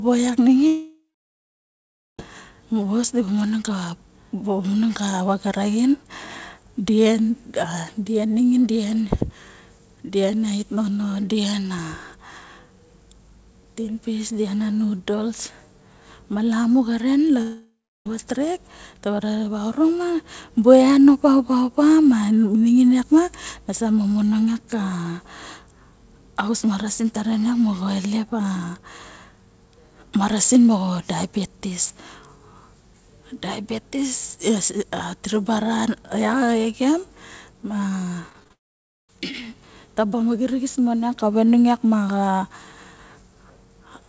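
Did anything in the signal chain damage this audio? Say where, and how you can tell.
Yes. The audio smears into a fading buzz, then silence, at 0.67–2.19 s, 17.41–18.06 s (after "ma lamu xaren", before "vat rek") and 38.53–39.09 s. This is likely a long network dropout.

From 38.29 to 38.51 s the speech turns choppy, with five brief holes patched over. This is repeated packet loss on the network, just before the final dropout.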